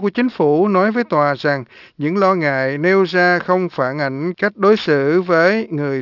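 From start to finish there's aliasing: content above 6 kHz folds back down into the band, so sibilants come out gritty and metallic, sitting roughly 25 dB under the speech. It sounds like the audio was cut down to a 12 kHz rate with no filter first.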